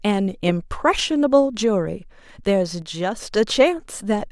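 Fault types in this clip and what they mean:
One channel drops out: from 2.82 to 3.22 s the speech falls abruptly by about 6 dB and then returns, which likely means one stereo channel went silent, so the mono sum carried only half the shared signal for those 0.4 s.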